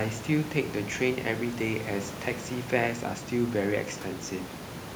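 A speech recording with no technical faults to report.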